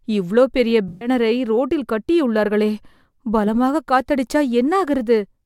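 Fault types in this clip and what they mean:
AAC frame loss with concealment: 128 ms after "இவ்ளோ பெரிய" is rebuilt from the last good spectrum, heard as a smeared patch, with blurred, noise-like harmonics on a spectrogram.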